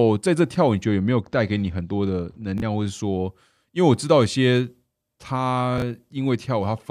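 A speech recording with two separate problems. From 0.84 to 2.86 s there's channel delay (comb filtering): one side lags by only a couple of samples, so summing to mono cancels the top end, with the first notch near 10 kHz, and the voice turns dull. Then at 2.58 to 2.62 s and again at 5.78 to 5.82 s we get chunks out of order. A 20 ms block lands one chunk late and plays after its neighbour, so there's a brief jumbled stutter.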